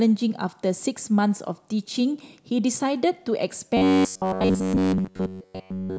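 From 3.77 s to 5.98 s the speech becomes robotic sound from repeated short buffers, a rigid metallic buzz at 94.1 Hz. New audio likely arrived too seldom, so a roughly 10.6 ms snippet looped throughout, showing as identical repeating waveform cycles and evenly spaced spectrogram harmonics.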